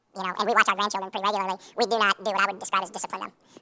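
Throughout, the samples are played back at twice their recorded rate with no conversion, a wrong sample rate that fits 8 kHz audio played at 16 kHz. The speech runs 2.0 times fast and sits a full octave (12 semitones) high.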